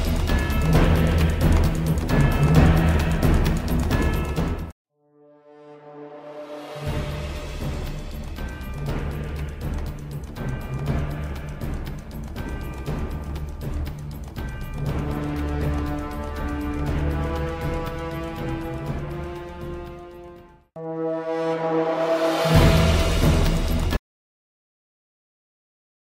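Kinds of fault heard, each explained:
Audio dropout to silence: at 23.97 s the sound stops abruptly and never returns, leaving about the last 2.2 s of the clip as silence with no room tone or background underneath, so whatever followed is simply missing. A gap that clean, with nothing fading out, points to the input disappearing while recording carried on writing silence, likely through a disconnected device, a failed link or an accidental mute rather than anything in the sound itself.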